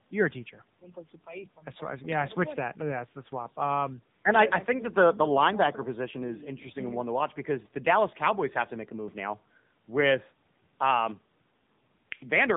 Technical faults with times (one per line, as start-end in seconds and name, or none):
0.00-12.56 AMR narrowband mobile codec